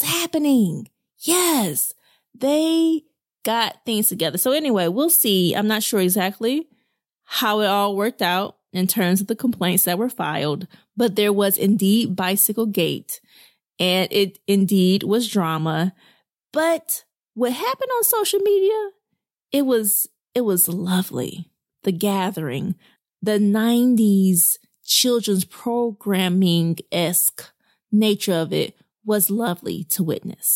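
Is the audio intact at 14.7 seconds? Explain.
Yes, the speech at 14.7 seconds plays through intact, with no dropout, click, glitch or other fault at that moment.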